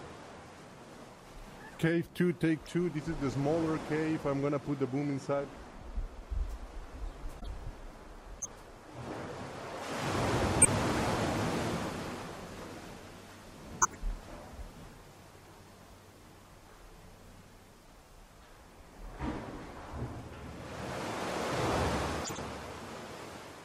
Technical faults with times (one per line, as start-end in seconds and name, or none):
2.65-2.67 corrupt frame decoded
7.40-7.47 corrupt frame decoded
8.40-8.48 corrupt frame decoded
10.62-10.68 corrupt frame decoded
13.81-13.96 corrupt frame decoded
22.24-22.39 corrupt frame decoded